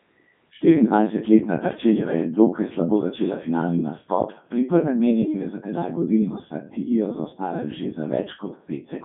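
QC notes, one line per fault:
Throughout, Codec 2 vocoder: the speech comes out robotic and buzzy, with a synthetic quality, and the damage is heavy. The decoder rebuilds the speech from sine waves driven only by pitch, voicing, energy and a coarse spectral envelope, so the original waveform never arrives. The audio sits in a telephone-like band of about 150 Hz to 3.6 kHz, with nothing above 3.8 kHz, and the texture fits the codec's top 3.2 kbit/s mode.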